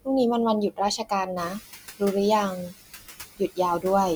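Right from the start you can hear noise suppressor artifacts. The suppressor is pulling down whatever bands it reckons are steady noise, frame by frame, so the background dips in the gaps and swells back up under the speech.

The first case of speech cut by the noise suppressor comes between 0.97 and 1.28 s. Only about a tenth of a second of speech is affected, but it drops by about 15 dB at the deepest point. The suppressor has mistaken soft speech for noise and ducked it with the background, so that bit sounds swallowed.

At around 1.5 s the room noise jumps by about 15 dB, ending up roughly 16 dB below the speech. From 1.36 to 1.58 s you get the noise suppressor catching up. Its noise estimate lags the jump, so the louder background comes through with less reduction at first. Then it takes about 220 ms to adapt and pull the noise down by about 8 dB.

Speech cut by the noise suppressor happens again from 1.50 to 2.02 s, with around half a second of speech turned down by as much as about 20 dB. 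It happens once more from 2.57 to 3.58 s, with roughly a full second affected at up to about 20 dB. In both stretches the affected speech sounds swallowed or faint along with the background.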